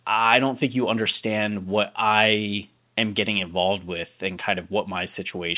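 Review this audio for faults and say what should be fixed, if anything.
Nothing needs fixing: the speech sits about 47 dB above a low background of room noise, and its band stops at 4 kHz, which fits a telephone-grade call path consistent with 64 kbps G.711 mu-law.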